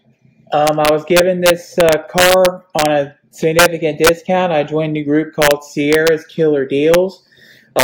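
The audio suffers integer overflow. Loud peaks wrap to the opposite sign instead of being limited, producing violent cracks. The longest run spans 0.67 to 2.86 s. Shorter bursts occur at 3.59, 4.05, 5.42, 5.93, 6.94 and 7.79 s. Overdrive reaches only about 2 dB.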